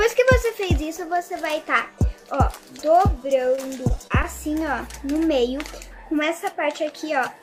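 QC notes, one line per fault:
3.55–4.25 s, repeated packet loss (robotic sound): about five brief dropouts, longest near 26 ms, are patched by extending prior audio, giving choppy sound with pieces missing.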